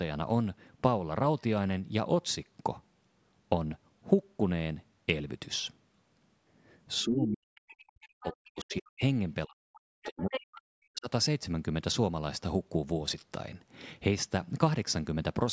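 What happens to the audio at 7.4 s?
At 7.4 s the talker's speech is being suppressed in double talk, most likely because the echo canceller met both sides speaking at once, could not tell the near-end voice from its own loudspeaker echo, and turned everything down. From 7.03 to 7.55 s, about half a second, the voice sinks sharply, by roughly 40 dB at its deepest, so the speech fades.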